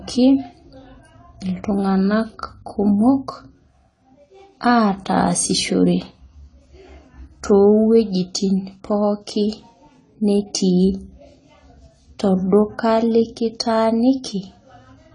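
Speech runs throughout with AAC compression damage: nothing above 10 kHz, and sibilants and sustained vowels warble and fizz. A plain low-pass filter would sound dull but clean, so the smeared texture points to a starved encoder, likely AAC-LC at roughly 24 kbps.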